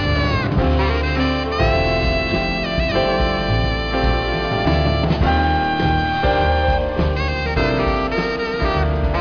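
No technical faults can be heard anywhere in the audio.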